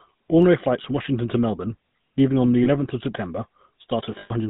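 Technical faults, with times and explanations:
throughout, GSM full-rate codec: The speech has passed through the original GSM full-rate coder, consistent with its 13 kbps rate, which rebuilds the voice from a vocal-tract model and sparse pulse excitation with nothing above 4 kHz. The voice sounds plainly buzzy, gravelly and band-limited.
0.42 s and 2.20 s, dropped samples: At each point the stream skips ahead by a couple of samples, likely from a brief transfer glitch, so the waveform steps abruptly. Each step is a single sharp click. The second falls just before "leaving on the."
0.82–0.86 s, 2.64–2.67 s and 4.18–4.31 s, lost GSM frames: Damaged frames were concealed by repeating the last good frame's parameters. The first two gaps each fit one 20 ms frame, the second just after "leaving on the," and are brief metallic blips. The last covers about 120 ms and rings roughly.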